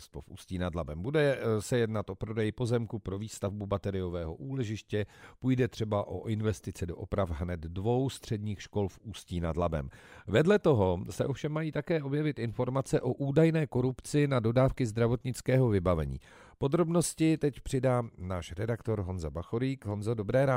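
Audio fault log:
Nothing to log here, as there's no fault anywhere in this speech clip.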